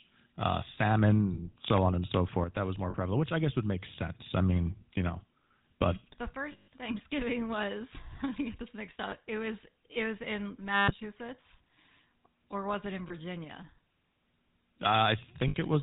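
From the start the speech carries the GSM full-rate codec: the vocal tract is modelled and driven by regularly spaced pulses, with only every third excitation sample kept, which gives a buzzy, gravelly roughness. A spectrogram shows nothing above 4 kHz and a coarse, comb-like harmonic texture, in keeping with a 13 kbps full-rate stream. The codec damage is plainly audible throughout the clip.

Lost GSM frames occur at 1.34, 2.90, 6.52, 9.10, 10.74, 13.08 and 15.48 s. At each point the decoder reuses the last good frame's parameters, so the sound hangs as a rough, metallic ring. Most are brief, about 20 to 60 ms, which fits one to three frames. The loss at 6.52 s is scattered over 200 ms, with a run of around 150 ms, and the one at 10.74 s lasts 140 ms. On a spectrogram each appears as a smeared, frozen horizontal band, and the waveform shows a repetitive envelope.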